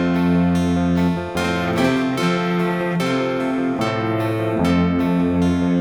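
Nothing in the signal stands out as a technical fault: the sound holds steady, with no interruptions, distortion or other disturbances.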